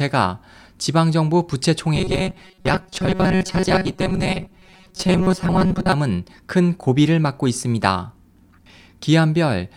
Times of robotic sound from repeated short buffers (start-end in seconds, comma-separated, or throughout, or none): 1.95-5.92